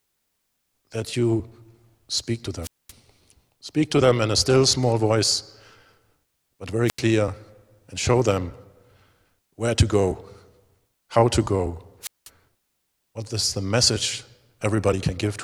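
At 2.62–2.92 s, 6.86–7.01 s and 12.01–12.29 s the speech suffers wireless microphone squelch dropout. The FM signal fades, hiss swells, and the receiver's squelch mutes it for about 225, 85 and 193 ms. That brief rise of static before each hole separates it from a clean digital dropout.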